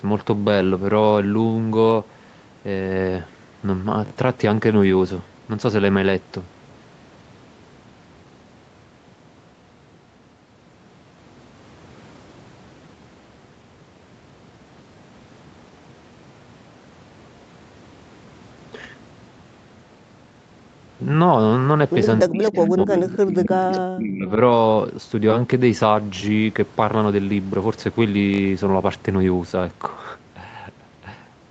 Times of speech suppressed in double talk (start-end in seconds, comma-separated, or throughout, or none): 22.29-24.40